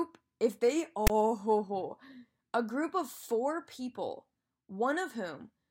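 File tags played as audio, from 1.07 to 1.10 s: for about 30 ms the speech is replaced by a block of metadata that the decoder has read as if it were sample values. The text portion becomes a loud, harsh rasp pushed off to one side of the waveform, since character bytes cluster in a narrow range rather than centring on zero. It then drops into dead silence where the zero padding sits, and the whole burst starts and stops with hard, unsoftened edges.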